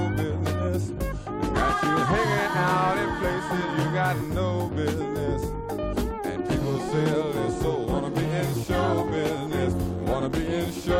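A screen or video cable coupling into the audio path causes video or display buzz from 8.06 s to the end, a 75 Hz field-rate buzz with hash above it, about 20 dB below the main sound.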